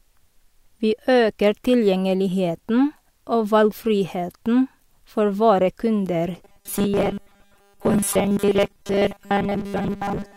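After "valgfriheten for våre kunder", from 6.45 s to the end, the speech turns to robotic sound from repeated short buffers: a rigid, metallic 200 Hz buzz, likely a 5 ms chunk looped while most real audio is skipped. Unlike flanging, its pitch never sweeps.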